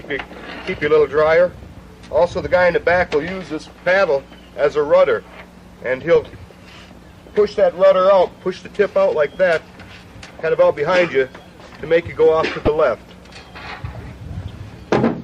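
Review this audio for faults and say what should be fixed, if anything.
Weak DAB reception let bit errors, around a few tenths of a percent, slip past error correction into the MP2 audio. Corrupted sub-band samples put short blips of noise in single bands, and corrupted scale factors make bands jump in level for up to a frame. This DAB burbling occurs at 6.02–6.27 s, 9.41–9.55 s, 12.61–12.68 s and 14.33–14.54 s. A better antenna position or stronger signal would prevent it.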